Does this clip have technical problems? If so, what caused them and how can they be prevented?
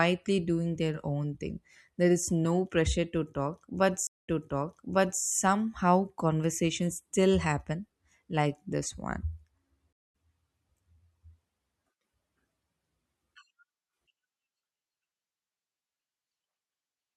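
Yes, there are two stream reconnects. At 4.07 s the speech drops out for about 146 ms, then picks up 1.01 s earlier than where it stopped, so you hear a stretch repeated until 5.22 s, which fits a server resending a burst of buffered audio. At 9.93 s there's a 141 ms gap, and it resumes roughly 150 ms later, skipping a little, until 10.07 s. Each time the connection broke and a fresh decoder started mid-stream. A larger client buffer with seamless reconnection and resume-by-offset logic would keep these from being audible.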